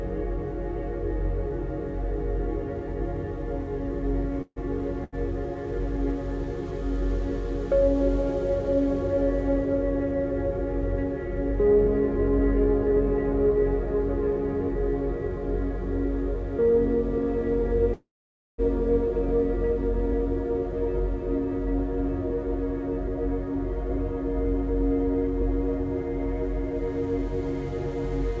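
At 4.42 s the sound stops moving forward: the last moment carries on as a fading buzz that drops to silence for about 40 ms, and then the audio resumes at 4.58 s from exactly where it left off, about 142 ms later than it should. This is a call audio freeze, likely caused by packets held up in transit so the jitter buffer ran dry and the receiver padded the gap.

A briefer hitch follows at 5.04 s to 5.15 s: one sound is held about 84 ms too long with a faint buzzy dip before things continue, with nothing skipped. That is a short stall from a late packet. The packet missed its slot, so the receiver stretched what it had until the packet turned up.

The second call audio freeze, at 17.93 s to 18.60 s, is much longer. The fading buzz gives way to roughly half a second of silence (520 ms), and the audio picks up intact after a 648 ms hold, again from the point where it stopped. Throughout, the G.722 call codec at 64 kbps leaves nothing above 8 kHz.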